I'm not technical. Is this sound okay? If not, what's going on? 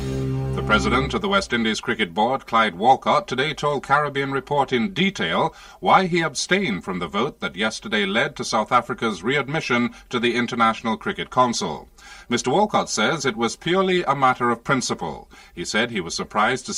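No. Throughout the clip there is channel delay, which causes comb filtering. One side of the recording arrives about 5 milliseconds late. When the two sides are mixed together, some pitches cancel out, starting around 100 Hz and repeating at regular steps above that. The result is a hollow, phasey, boxed-in quality across the whole sound, because parts of its tone are missing.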